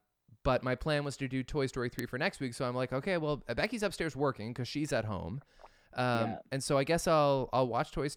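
Three bit error spikes land at 1.99 s, 3.66 s and 6.15 s: single flipped bits jolting a sample or so, heard as brief broadband ticks, loudest first at about -12 dBFS.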